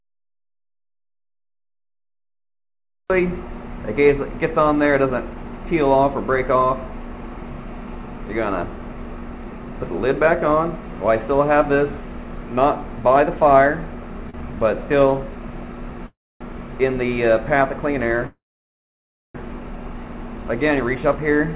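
At 14.30–14.36 s the sound is held a touch too long with a faint buzz, a short stall from a late packet: the jitter buffer ran dry and the receiver stretched the last sound for about 37 ms before continuing where it left off.

At 16.07–16.43 s and again at 18.27–19.37 s the audio freezes, a brief buzz fading into silence (about 270 ms and 950 ms of it), then resumes unchanged. Each call audio freeze was likely caused by delayed packets emptying the jitter buffer, which inserted gaps of 340 ms and 1080 ms.

From 20.35 to 21.54 s the sound runs hurried at the same pitch, about 106% speed. This jitter buffer speed-up trims tiny pitch-period slices, roughly 70 ms in total, to shed the built-up delay. Throughout, the band stops at 4 kHz, as expected from the G.711 A-law call path.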